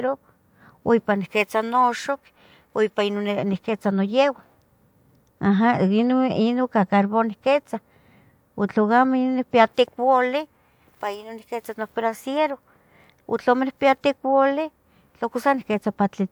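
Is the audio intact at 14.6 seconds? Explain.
Yes, at 14.6 seconds the speech is intact, with no dropout, glitch or other fault at that point.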